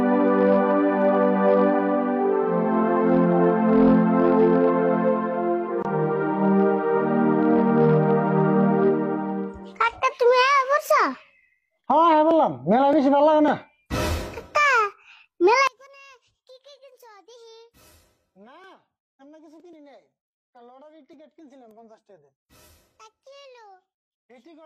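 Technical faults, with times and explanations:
15.67–24.66 s, one channel inverted: the centre of the sound collapses by about 31 dB, leaving only a faint residue from 15.67 s to the end. This likely comes from one stereo channel having reversed polarity, so everything common to both channels cancels when they are combined.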